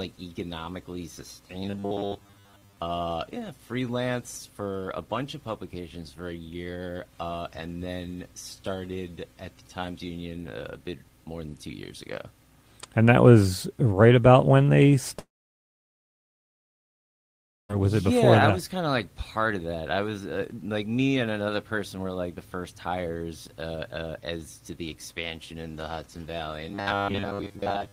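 From 1.63 to 2.77 s, and again from 26.69 s to the end at 27.93 s, there is robotic sound from repeated short buffers: a rigid 100 Hz metallic buzz, likely from late audio delivery forcing 10 ms fragments to be replayed over most of each stretch while fresh material is skipped. At 15.19 s a long network dropout begins, likely from packets not arriving. A brief fading remnant of the last sound gives way to about 2.4 s of silence, and the audio resumes at 17.75 s with roughly 2.5 s of material missing.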